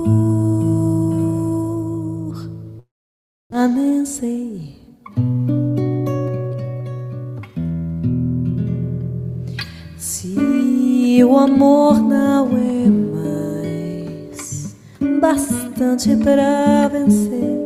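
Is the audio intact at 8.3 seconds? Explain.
Yes, the audio at 8.3 seconds is intact, with no dropout, click, distortion or other fault audible at that moment.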